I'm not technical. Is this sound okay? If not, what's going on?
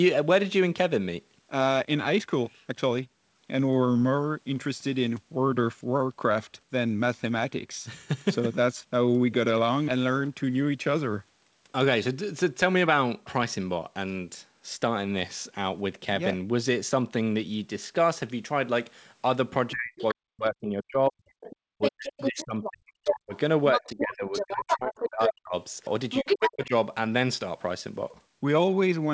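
No. From about 19.7 to 23.4 seconds, again from 23.8 to 25.6, and briefly around 26.2 to 26.7, the speech sinks to almost nothing or breaks into pieces. This is speech suppressed in double talk: both sides likely spoke at once, and the echo canceller turned everything down.

A second, separate voice also slips in around 20.0 to 20.1, 21.4 to 22.7, 23.1 to 23.4, 23.7 to 25.3 and 26.1 to 26.7 seconds, sometimes as loud as the main speech. That is the other side's voice leaking through, likely from the loudspeaker, because the echo canceller did not fully remove it.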